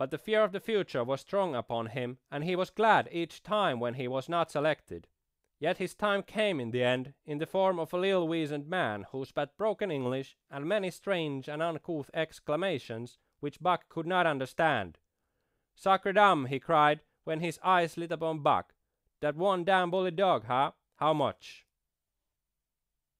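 Nothing goes wrong anywhere in this speech recording; there are no technical faults to point to at any moment.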